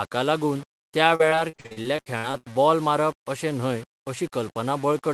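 The speech has likely been reduced to very few bits and rounded without dither, which fits about 7-bit quantisation. Because the rounding error tracks the signal instead of being randomised, low bit depth without dither leaves a grainy distortion that shifts with the voice, with the error sitting roughly 25 dB below the speech. Quieter syllables and decays turn gritty and coarse, and the softest moments sputter instead of fading smoothly. This texture runs through the whole clip, beneath the Opus call path's coding, which keeps content up to about 12 kHz.

From 1.15 to 2.45 s, just after "लागून त्या" and ending before "बॉल मारप अशें", the connection drops or delays packets again and again. Each hole is filled by stretching the last bit of sound, but over a dozen gaps arrive in quick succession, the longest about 58 ms, and patching covers just over a third of the stretch. This repeated packet loss gives the speech a choppy quality, with fragments audibly missing.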